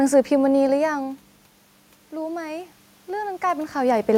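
From 2.1 s to 4.13 s there is automatic gain rising. The input drops by about 15 dB, and the control raises its gain by about 4 dB over two seconds, so the speech and room noise swell together slowly, overlapping a talker movement around 3.5 s.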